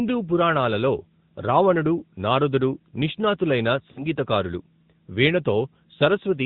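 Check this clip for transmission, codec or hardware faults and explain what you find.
Two faults are audible: mobile codec coding throughout the clip and a short dropout from lost frames.

AMR narrowband mobile codec, throughout: nothing passes above 4 kHz, and the voice sounds buzzy and synthetic, which fits AMR-NB at around 10.2 kbps.

Lost AMR speech frames, 3.92 to 4.06 s: for about 40 ms the decoder repeats the last pitch and tract settings at falling gain. The speech smears and dips before recovering weak or rough for a moment, consistent with two lost 20 ms frames.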